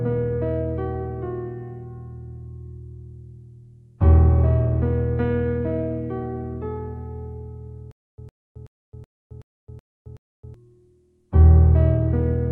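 Stutter with silent gaps, 7.91 to 10.54 s: a 109 ms burst repeats seven times between 267 ms silences, likely a stalled stream replaying its last fragment.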